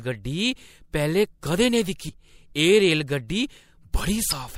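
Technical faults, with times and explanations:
2.08 s and 4.29–4.33 s, damaged data in a compressed stream: just after "कदें नेईं" comes a brief glitch of about 16 ms, and near the end a longer one of about 40 ms. Corrupted bytes left the decoder misreading those frames and losing sync until it found the next valid frame header. On a spectrogram each shows as a short break in the harmonic pattern. On the waveform it is an abrupt discontinuity.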